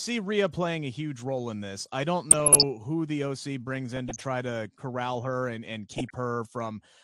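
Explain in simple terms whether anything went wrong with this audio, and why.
The whole speech recording sounds dull and gritty, with a gurgling texture behind the voice. This points to MP2 compression, the format used by DAB digital radio, likely squeezed hard enough that the top frequency bands were switched off and the remaining ones stored coarsely. With too little data to go round, the high end vanishes and the rest turns grainy and watery. The damage is plain to hear.

On top of that, three short bursts of DAB burbling appear: 2.31 to 2.69 s, right after "in this I don't"; 3.97 to 4.24 s, just before "to corral her and"; and 5.91 to 6.15 s, right after "corral her and and". Reception errors slipped past the radio's error correction, so narrow slices of the sound picked up short blips of noise.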